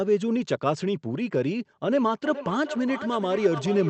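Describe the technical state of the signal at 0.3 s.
At 0.3 s the speech signal is intact, with no fault, carrying only the ordinary band-limited sound of a call path whose top end stops around 8 kHz, which fits an Opus stream at about 32 kbps.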